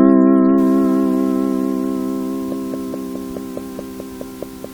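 From 2.52 to 4.65 s, a train of clicks sits over the sound. About ten sharp, similar ticks arrive at a steady 4.7 per second. They peak around 10 dB above the audio. Interference or a faulty connection or power supply is the likely cause.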